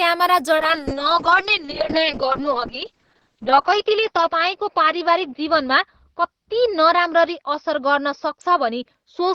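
From 0.58 s to the end, the speech goes through a call bitrate drop: the encoder's rate falls from 32 to 6 kbps and stays at its lowest for about 2.6 s. With so few bits, coding turns coarse and rough, and the audio band shrinks from 20 kHz to 6 kHz, dulling sibilants. Unlike a fixed low-pass filter, the muffling arrives with grainy, watery distortion.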